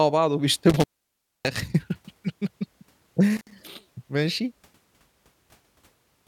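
At 0.70 to 1.59 s (open about 611 ms) and 3.37 to 3.51 s (about 58 ms), intermittent contact cuts the speech out; unlike a clean digital dropout, crackle marks each break's edges.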